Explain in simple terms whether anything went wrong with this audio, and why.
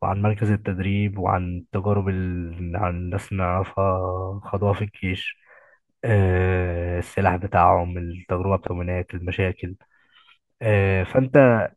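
A CD skip at 8.67 s: the speech cuts out for a split second, then carries on from a different point. A knock or flaw on the disc made the player's laser jump to another turn of its spiral track.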